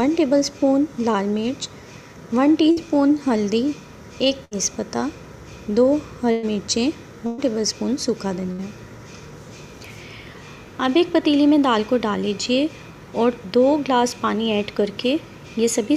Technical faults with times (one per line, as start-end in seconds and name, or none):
2.71-2.80 burst of packet loss
4.45-4.54 burst of packet loss
6.31-6.46 burst of packet loss
7.27-7.41 burst of packet loss
8.52-8.61 burst of packet loss